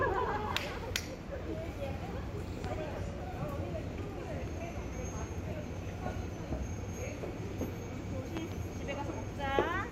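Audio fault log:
2.64–2.67 s and 8.37–8.54 s, loud pop: A single sharp pop, then a double pop, rise around 15 dB above the everyday sound, which continues underneath. A sudden voltage step, likely from a plug, switch or static, was added and shaped by the following circuits.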